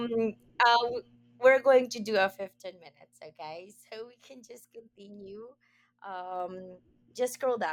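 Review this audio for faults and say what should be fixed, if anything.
Zipper noise at 2.26–2.65 s, after "going to do a", and 6.14–6.57 s, after "we can just continue". The level drops about 15 dB, then rises about 15 dB, in unsmoothed 2 dB and 1 dB steps at around 20 per second. Each step ticks, which a clean fader move would not. Ramping the gain per sample instead of jumping once per block prevents it.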